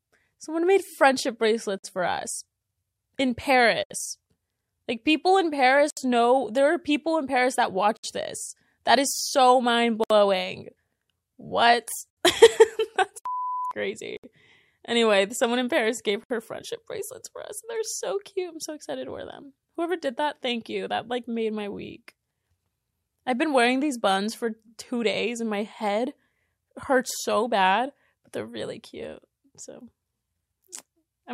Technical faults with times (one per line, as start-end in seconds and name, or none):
1.78-1.84 gap at a join of encoded pieces
3.84-3.90 gap at a join of encoded pieces
5.90-5.97 gap at a join of encoded pieces
7.97-8.04 gap at a join of encoded pieces
10.04-10.10 gap at a join of encoded pieces
12.10-12.17 gap at a join of encoded pieces
14.17-14.24 gap at a join of encoded pieces
16.24-16.30 gap at a join of encoded pieces